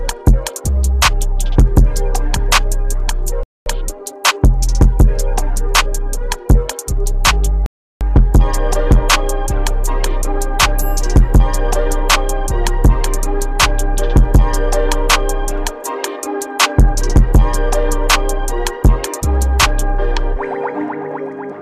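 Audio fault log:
3.43–3.66 s and 7.66–8.01 s, rebuffering stall: the player ran dry twice, so the sound drops to silence for about 0.23 s and 0.35 s, then picks up exactly where it left off.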